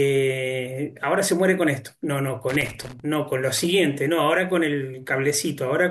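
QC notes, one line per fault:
2.49 to 3.00 s, loose connector crackle: for about half a second the speech breaks into an irregular scratching burst as a worn or dirty contact makes and breaks the signal path, chopping the audio into fragments, with pops where any DC on the line jumps at each reconnection. Unlike isolated digital clicks or a clean dropout, the disturbances come in a ragged, uneven cluster rather than single evenly spaced ticks or one silent gap.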